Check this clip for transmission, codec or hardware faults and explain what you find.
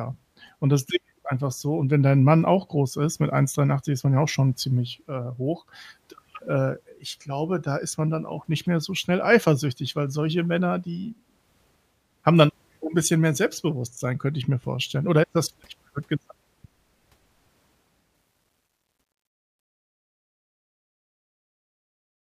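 Truncation distortion on a fade runs from 18.15 s to the end at 22.30 s, worst from 19.72 s onward. The fade-out is being requantised without dither to what sounds like about 11 bits, so the fading speech collapses into coarse square steps and turns gritty.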